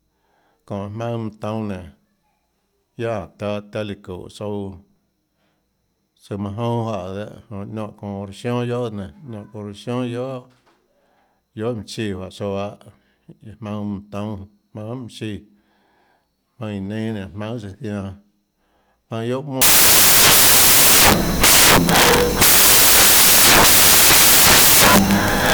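From 19.62 s to the end at 25.54 s, the speech gives way to loud, harsh broadband noise caused by samples built from the wrong bytes. The reader assembles each sample with its bytes misordered or misaligned, so the rapidly changing low bits dominate every value.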